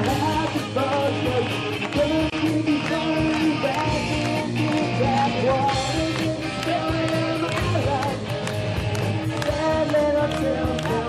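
At 2.30 s a 25 ms silence cuts in: a gap at a join of encoded pieces, where unremoved encoder delay and end padding meet. Unlike a dropout, the sound resumes exactly where it stopped, nothing lost.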